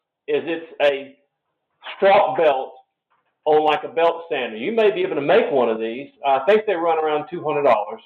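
Nothing stood out as a technical problem on listening.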